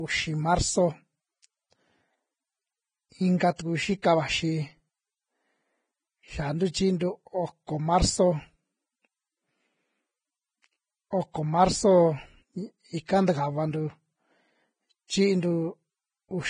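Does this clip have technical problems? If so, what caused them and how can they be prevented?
Yes. Throughout the speech there is heavy damage that likely comes from Vorbis compression at a very low rate, consistent with roughly 19 kbps. Nothing is present above 9.7 kHz, and the remaining treble has turned grainy and hissy because its fine detail was quantised so coarsely it became noise. A simple low-pass filter would sound dull but clean, without this grain. To prevent it, encode at a higher Vorbis quality setting or bitrate.

At 4.02 s there is pre-echo: a brief hiss of about 19 ms runs just ahead of a sharp attack. The codec spread noise sized for the loud onset across its whole block, including the quiet moment before it. Unlike a click, this is soft noise leading into the attack, not a discrete impulse. Using more bits or a codec setting that switches to shorter blocks on transients would prevent it.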